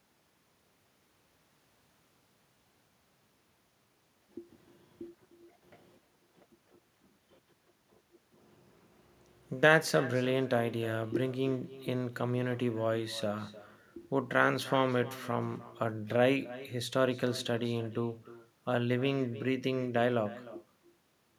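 From the start to the end of the clip, every bit of speech gets shadowed by a faint copy of itself arriving around a third of a second later. That's echo with no canceller: the far end is playing the call over a loudspeaker, their mic picks it back up, and nothing strips it out before it returns. The copy sits about 18 dB down, so it's quiet, but it sounds thin and trails each phrase.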